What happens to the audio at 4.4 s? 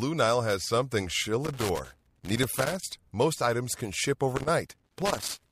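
Loose connector crackle breaks in at 4.36 s, right after "items can ship", and runs to 5.52 s. A worn or dirty contact in the cable path is shifting. It makes and loses contact in quick, uneven bursts. That chops the signal on and off. Any DC sitting on the line turns each break into a pop. The result is a ragged scratching crackle laid over the speech until 5.52 s.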